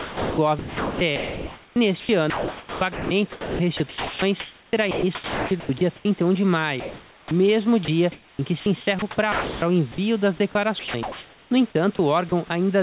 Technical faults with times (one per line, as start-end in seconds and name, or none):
0.00-6.05 sound chopped by the voice detector
6.80-7.31 comfort noise in place of the background
7.29 onset clipped by the voice detector
7.85-9.98 sound chopped by the voice detector
10.79-12.50 sound chopped by the voice detector